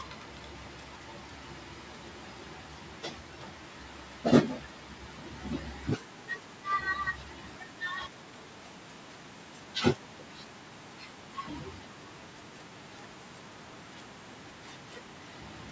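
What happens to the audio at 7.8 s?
A faint echo leak runs from 7.44 to 7.81 s, likely an incomplete echo cancellation. A copy arrives 352 ms late, roughly 25 dB down, as pale repeated spectrogram traces.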